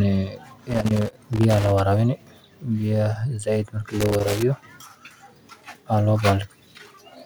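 Loose connector crackle hits from 0.69 to 1.80 s and again from 4.01 to 4.43 s: a worn contact making and breaking, chopping the speech into scratchy bursts.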